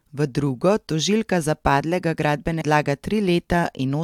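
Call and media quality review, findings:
Stream segment skipped at 2.60 s, right after "tožilka za padlega": audio jumps ahead with a small blip, a chunk of programme just gone. Likely a segment that never loaded, so the player carried on with the next one.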